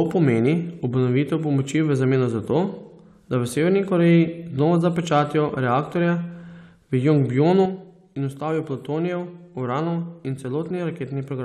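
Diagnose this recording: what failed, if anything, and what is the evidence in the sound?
At 7.66 s the speech falls abruptly by about 6 dB and stays down, likely one channel dropping out in the analogue wiring before the mono sum.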